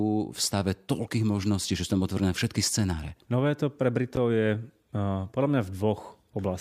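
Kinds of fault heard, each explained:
Chunks out of order: from 4.15 to 4.17 s, just after "to pre", a chunk of about 10.7 ms plays one position late, after the chunk that should follow it. No audio is lost, but the three hard joins produce a brief garbled moment.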